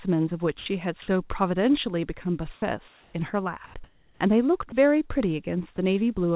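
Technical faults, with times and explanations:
0.58–0.66 s, 2.54–2.62 s and 4.70–4.72 s: sound dropped by the voice detector. The sender's voice detector likely mistook quiet speech for background and stopped transmitting, so the receiver substituted comfort noise. About 80 ms, 30 ms and 20 ms of speech disappear into a flat hiss before the speech resumes.
2.88–3.14 s, 3.66–3.74 s and 3.84–4.20 s: comfort noise in place of the background. In the pauses the sender likely switched to discontinuous transmission, and the receiver synthesised noise to stand in for the background, which sits about 26 to 31 dB below the loudest speech. The real room sound gives way to a smooth, featureless noise about 2 to 3 dB quieter.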